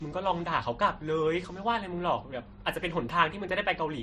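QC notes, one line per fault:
Throughout: transcoding between lossy codecs. Nothing is heard above 13.6 kHz. Two different kinds of coding artefact sit together on the speech. This is likely a low-rate MP3, around 38 kbit/s, re-encoded as Vorbis near 34 kbit/s.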